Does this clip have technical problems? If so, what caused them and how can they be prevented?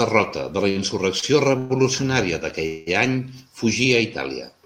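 Yes. There are two short stalls from a late packet, at 0.69 to 0.78 s and 1.20 to 1.24 s. In each, a packet arrived after its playout time, the jitter buffer ran dry, and the receiver held the last sound for about 61 ms and then 28 ms before resuming from the same point. Nothing is lost, but the sound is briefly drawn out, with a slight buzz or dip. A slightly deeper or adaptive jitter buffer would absorb delays this small.

There are also two call audio freezes, at 1.58 to 1.83 s and 2.67 to 2.89 s. Here the held sound runs much longer, about 116 ms and then 200 ms, and fades into a buzzy, hissing tail. It never drops to full silence. Unlike the short stalls, these leave a longer hold in the sound before the speech picks up exactly where it left off, so again nothing is missing. The likely cause is packets held up along the network path long enough to empty the buffer. Prioritising the call traffic with QoS and avoiding congested or unstable links would prevent this.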